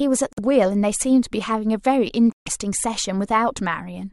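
At 0.33–0.39 s and 2.32–2.48 s the speech cuts abruptly to silence, likely a Bluetooth dropout. Unlike a stall, it resumes further along, with the missing stretch gone.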